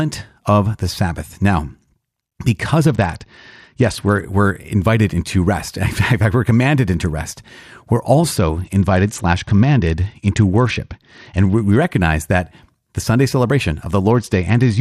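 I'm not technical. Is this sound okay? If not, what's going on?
No. Three times the speech briefly turns dull and gritty: from 2.9 to 4.2 s (just before "we're invited into rest"), from 8.37 to 11.77 s (just before "recognize that the"), and from 14.1 s to the end. This is a Bluetooth SBC bit pool drop: a busy wireless link made the phone squeeze the sound into less data. Unlike a dropout, the sound never stops. It just loses its crispness and turns rough, then recovers, except the last time, which runs to the end.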